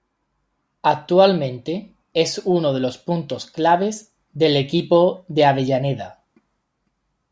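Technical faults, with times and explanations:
No technical faults can be heard in this speech.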